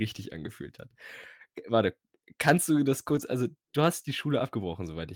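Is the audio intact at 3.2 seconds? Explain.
No. From 3.11 to 3.21 s there is a lost packet rebuilt from error correction: about 60 ms was decoded from low-bitrate redundant copies, so it sounds rougher and noisier, without a gap.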